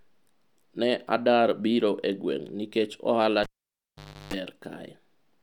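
At 3.43 s someone's pulled the cable and plugged it back in: a pop, then roughly 0.85 s of near silence, a 0.34 s burst of 50 Hz mains buzz as the tip makes contact alone, and a second pop when the speech returns around 4.34 s.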